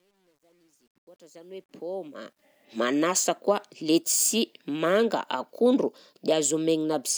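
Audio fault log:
0.0–2.65 s, truncation distortion on a fade: the fade-in rises smoothly in level, but its quiet start sounds gritty, worst from 0.0 to 1.7 s. The grain suggests a roughly 10-bit stage with no dither, which reduces low-level waveforms to coarse square steps.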